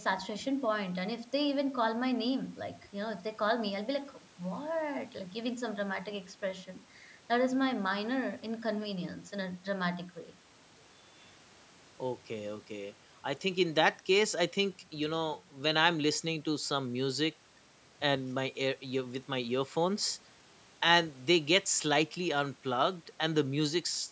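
Nothing goes wrong anywhere in this speech; it's simply been through a call's microphone processing, which trims the lowest bass and leaves nothing above 8 kHz, exactly as that kind of path is meant to.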